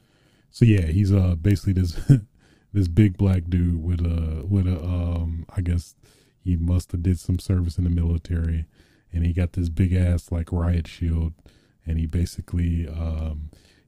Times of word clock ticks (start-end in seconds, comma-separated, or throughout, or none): 0.41-13.56